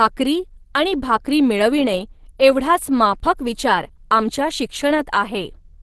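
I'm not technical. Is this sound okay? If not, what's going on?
No. The speech was likely squeezed hard by Opus compression in its speech-oriented mode to save data. From start to finish the voice sounds muffled and hoarse, with a coarse, grainy edge, and nothing above 12.1 kHz, so the crisp airy detail is gone.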